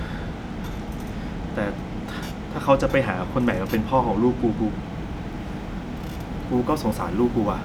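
Speech with sample clock jitter from 4.92 s to the end: an unsteady converter clock, wandering by a few microseconds, leaves a hiss about 35 dB below the signal that swells on loud, bright sounds and disappears in pauses, unlike steady background noise.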